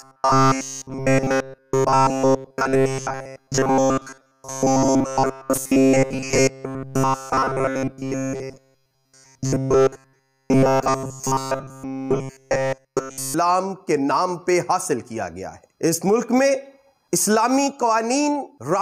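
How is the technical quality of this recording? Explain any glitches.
The technical quality is poor for the first 13 seconds. From 0.01 s to 13.34 s the sound becomes a rigid, metallic buzz at 133 Hz throughout. This is robotic sound from repeated short buffers, likely caused by audio arriving too seldom, so a roughly 7.5 ms chunk loops and its period sets the buzz rate.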